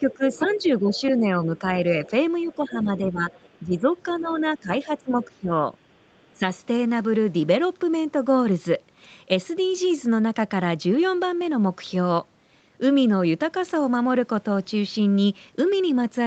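A speech recording from a call. Between 0.0 and 5.54 s, and briefly at 6.34 to 6.42 s, the talker repeatedly dips by roughly 10 dB, about two seconds in total. This is speech suppressed in double talk, likely the echo canceller turning everything down while both sides speak. It produces level dips rather than the clean gaps of packet loss. Underneath, the other side's voice is leaking through at 0.1 to 1.01 s and 1.57 to 5.28 s, around 20 to 25 dB below the talker, with a faint scrap at 6.22 to 6.26 s. This is likely loudspeaker echo the canceller missed, and it is a distinct second voice rather than room reverberation trailing the main one.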